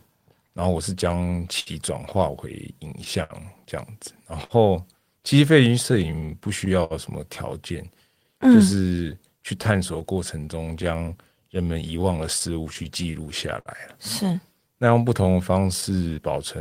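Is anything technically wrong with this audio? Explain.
Yes. Small timing hiccups recur unevenly throughout the speech: clock drift between sender and receiver, with the sender's clock running roughly five percent slow.

From 1.11 to 16.16 s, a slightly dragging, unsteady tempo: repeated timing corrections, where the receiver repeats short pieces so it runs at 98% speed, adding about 0.3 seconds.

From 1.60 to 15.85 s, brief smears and ticks: scattered short gaps, around twenty small holes, the longest about 70 ms, filled by continuing the previous sound.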